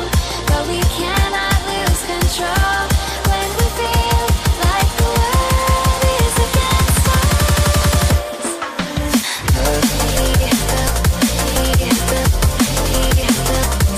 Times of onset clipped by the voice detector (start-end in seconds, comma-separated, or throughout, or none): none